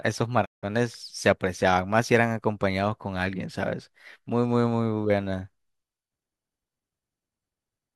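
At 0.44 s the speech drops out in a digital broadcast dropout that lasts until 0.65 s. The receiver stopped getting decodable frames and muted its output. The audio fades to silence over about 20 ms instead of being hard-cut, and roughly 168 ms of programme is simply lost, consistent with a run of about seven short frames. On a waveform this shows as a brief tapered flat gap. A spectrogram shows a clean blank vertical band across all frequencies.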